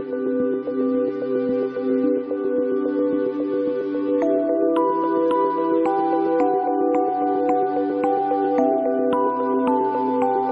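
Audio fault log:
No faults found in this clip.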